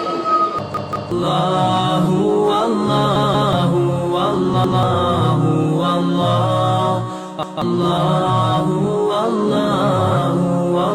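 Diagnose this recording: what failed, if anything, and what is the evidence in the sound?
The playback buffer failed. A short piece of sound repeats with hard joins, a stutter, at 0.74 to 1.12 s and 3.16 to 3.53 s, where it plays twice more, and at 4.64 to 4.83 s and 7.43 to 7.62 s, where it plays once more. Each repeat lasts about 186 ms, which fits an 8192-sample buffer. New audio arrived late, so the device replayed the last buffer. Roughly 0.4 s and 0.2 s of sound go missing at each stutter.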